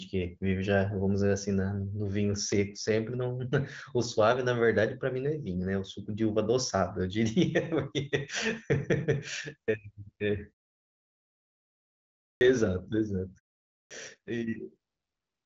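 Speech with clipped starts after a pause at 12.37–12.41 s and 13.87–13.91 s. The output path sleeps during silence and takes about 40 ms and 37 ms to wake, swallowing each onset.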